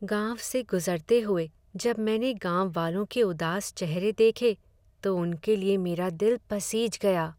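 Weak DAB reception let bit errors slip past error correction at 1.84 to 1.89 s, between "गुज़रते हुए" and "मैंने गांववालों के". Corrupted MP2 samples put short blips of noise into individual sub-bands across a few frames, producing a brief DAB burbling over the speech.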